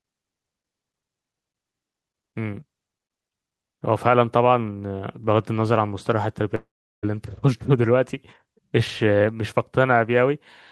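From 6.55 to 7.05 s the speech turns into a fading buzzy smear of the last sound, then near-silence for about 370 ms. It resumes with about 480 ms missing, likely a long network dropout. Unlike a brief packet-loss glitch, the concealment gives out and the lost audio never returns.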